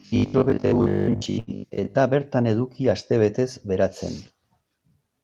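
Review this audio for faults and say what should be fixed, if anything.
From 0.02 to 1.97 s, just before "bertan eduki astebetez beratzen", the speech turns into a rigid, metallic buzz fixed at 50 Hz, the robotic sound from repeated short buffers. The likely cause is the player looping the last 20 ms of audio, repeating roughly two thirds of this stretch while skipping the real audio. Preventing it means raising the buffer depth or fixing the underrun upstream so fresh audio always arrives on time.

Inside that stretch, from 1.39 to 1.50 s, a sound is held unnaturally long with a slight buzz or dip. This is a short stall from a late packet. The receiver stretched the last sound by 80 ms until the packet arrived, then resumed with nothing lost but 80 ms more delay. A jitter buffer that adapts to network delay variation would absorb late packets like this before playback runs dry.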